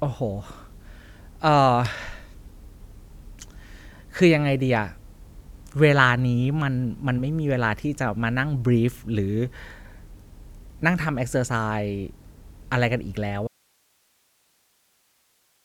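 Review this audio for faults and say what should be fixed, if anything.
At 13.48 s the speech gives way to an audio dropout to a faint residue that lasts to the end of the clip, leaving only hiss roughly 40 dB below the speech. The likely cause is that the signal feed broke while the recording path stayed live. On a waveform, the envelope collapses abruptly to a thin, flat band. On a spectrogram, the harmonic bands stop dead and only even, broadband noise remains. Securing cables and connectors and watching input levels during capture would prevent it.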